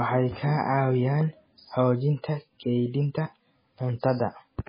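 MP3 compression damage runs through the whole speech clip: nothing is heard above 5 kHz, and the sound is watery and swirly with smeared attacks. This heavy damage is likely from a starved encoder, and it fits a very low bitrate such as 16 kbps, which drops the treble and flickers weak frequency lines from frame to frame.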